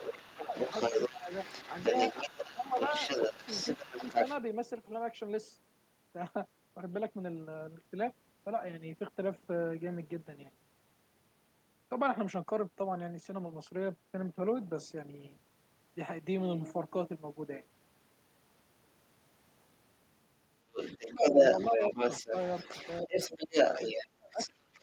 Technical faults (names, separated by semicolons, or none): other side's voice leaking through; speech suppressed in double talk